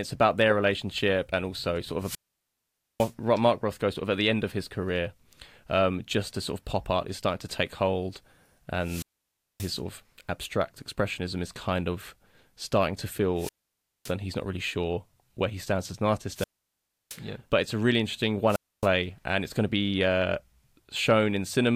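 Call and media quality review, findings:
Wireless microphone squelch dropout at 1.98, 8.79, 13.36, 16.32 and 18.47 s. Each has a brief hiss rise, then silence of 0.27 to 0.85 s. FM mic signal fades below the receiver squelch threshold, muting output.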